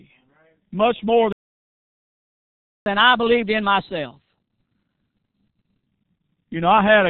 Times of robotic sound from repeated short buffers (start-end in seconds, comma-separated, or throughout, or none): none